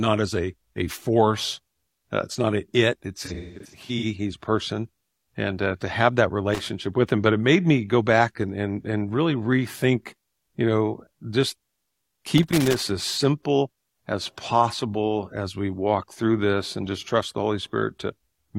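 From 3.25 to 4.05 s the speech turns smeared and noisy in patches, with brief phasey stretches. This is AAC frame loss with concealment. About 427 ms of audio went missing, scattered across roughly 770 ms, which points to around ten lost frames, the longest gap near a fifth of a second. The decoder filled each hole from the last good spectrum, and that guessed content gives the smeared, noisy character.

At 6.54 to 6.65 s, and again from 12.38 to 12.82 s, an irregular burst of crackle and scratching cuts through the speech. The first is a short crack of about 110 ms, and the second is a longer rough patch of about 440 ms. This is loose connector crackle. A worn or dirty contact was rapidly making and breaking, chopping the signal on and off and producing the scratchy, uneven texture.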